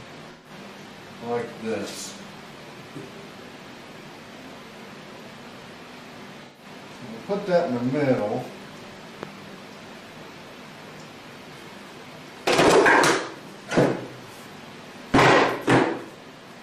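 At 0.31 to 0.51 s and again at 6.45 to 6.65 s there is AAC frame loss with concealment. About 128 ms of coded audio, which fits roughly three frames, went missing each time. The decoder rebuilt it from the last good spectrum, giving a smeared, noisy or phasey patch. On a spectrogram the fine detail blurs there into a uniform smear.

At 8.19 s the sound jumps ahead abruptly. This is likely a dropped buffer (overrun), where a stretch of audio of around 20 ms was overwritten before it was collected and the two sides were butted together with no gap. The waveform shows a sudden discontinuity rather than silence, and a spectrogram shows a thin vertical seam.

At 9.23 s a loud pop of about 10 dB above the surrounding signal lasts around 20 ms while the sound continues underneath. It likely comes from an electrical step or pulse, such as a plug, switch, static or driver glitch. It appears as a tall, narrow spike in the waveform and a bright broadband vertical line on a spectrogram.

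Further dropped-buffer skips follow at 12.68 s, losing around 30 ms, and at 15.44 s, losing around 20 ms. Each shows the same abrupt seam.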